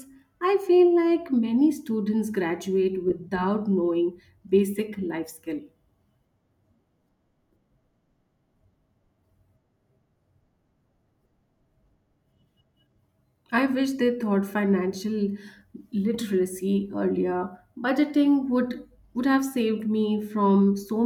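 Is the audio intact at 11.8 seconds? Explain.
Yes, the speech at 11.8 seconds is intact, with no audible fault at that moment.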